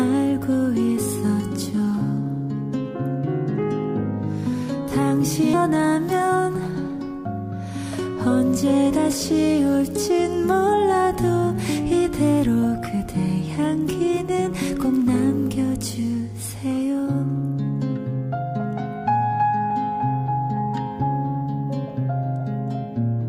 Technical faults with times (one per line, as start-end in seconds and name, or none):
5.53 skip ahead
5.71-6.48 jitter buffer speed-up